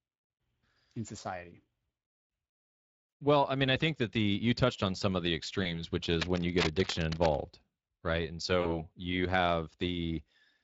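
Speex coding runs through the whole clip, and its damage is plainly audible. The speech has a hoarse, grainy edge because the CELP coder has too few bits to rebuild the excitation faithfully, which fits a middle Speex setting around 20 kbps. Unlike broadband hiss, this roughness follows the speech itself.

At 3.09 to 3.13 s comes VoIP packet loss concealed by the speech codec. About 40 ms goes missing, which fits two lost 20 ms frames. The decoder stretches the last sound into a brief smear. A second instance follows just after "on some of the", from 5.63 to 5.82 s. Here a single frame's gap is followed by weak, distorted speech that lingers while the decoder rebuilds its state. That lingering is what separates concealment from a simple dropout.

From 6.03 to 7.36 s, cable scratch noise adds dense, uneven bursts of scratching and rustling at roughly 10 dB below the speech. The likely cause is a worn cable or connector being moved. 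It is irregular and gritty, not tonal, and it sits on top of the speech without replacing it.

At 8.61 to 8.86 s, packet loss concealment returns. Around 40 ms is lost, and the decoder fills it with a fading extrapolation. The sound stays weakened for a short while before recovering.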